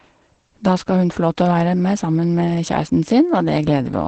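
Throughout the speech there is Opus voice compression, and the damage is plainly audible. Nothing sits above about 8.7 kHz, and within that band the SILK coder's coarse excitation leaves the voice hoarse, slightly muffled and faintly robotic, which fits a bitrate near 12 kbps. A simple low-pass filter would dull the top just as sharply but keep the voice smooth. Here the graininess in the remaining band marks it as codec damage.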